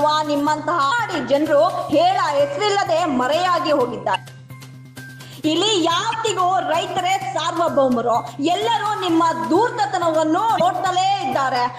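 Damaged data in a compressed stream surfaces four times: a blip at 0.90 s, then short squawks at 4.12–4.16 s, 6.10–6.15 s and 10.57–10.61 s. Each time, corrupted bytes make the decoder misread frames, lose sync and hunt for the next valid frame header.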